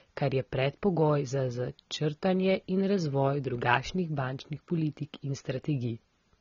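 AAC compression throughout: the speech sounds dull and smeared, with nothing above 6.9 kHz and fizzy sibilants, likely from AAC-LC at a low bitrate near 24 kbps.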